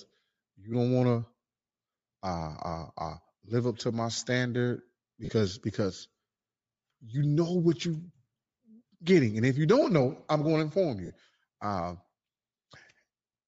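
Speech, likely carried over a Bluetooth LC3 compression link, where the encoder runs at a low bitrate and discards much of the upper spectrum, filling it with synthetic noise. That leaves plainly audible codec damage throughout: a breathy, grainy edge, consistent with roughly 32 kbps. Lost LE Audio frames occur at 5.25–5.29 s, just after "up to my standard", and again at 11.06–11.10 s. Each gap lasts about 40 ms, which fits four dropped 10 ms frames. The decoder concealed them by repeating the last spectrum with scrambled phase, so the speech briefly turns into a noisy smear.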